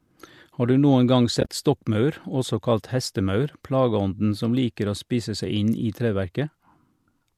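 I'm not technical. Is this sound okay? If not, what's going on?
No. Just after "du noen gang", from about 1.41 to 1.48 s, the speech drops out in short gaps. This is AAC frame loss with muting. Small chunks of the compressed audio went missing, and the player filled each one with silence. About 60 ms vanished, spread over 80 ms, with the longest gap around a thirtieth of a second. The sound fades out and back in softly, so you hear brief holes. The light low-delay AAC compression used in video calls is the likely source of those chunks.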